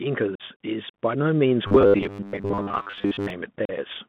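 Throughout, the speech carries the sound of the Bluetooth CVSD headset codec: the line is confined to roughly 150 Hz to 3.5 kHz, and the delta modulator's adaptive step can't track loud high-frequency energy, leaving scratchy sibilants and a plainly audible granular hiss under the speech.

From 0.35 to 0.42 s comes unconcealed Bluetooth headset packet loss, about 45 ms of audio missing in total, which points to a run of lost headset packets. With nothing filling the gaps, the speech drops out with hard, abrupt edges and returns briefly quieter.

Between 1.67 and 3.30 s the speech turns into a rigid metallic buzz at 100 Hz that only loosely follows the speech contour. This robotic sound from repeated short buffers is likely caused by late-arriving audio being padded by looping the last chunk, which fits a 10 ms buffer, while much of the real signal is skipped.

At 3.65 to 3.70 s a second unconcealed Bluetooth headset packet loss removes about 37.5 ms, again leaving an abrupt hole before the speech resumes at reduced level.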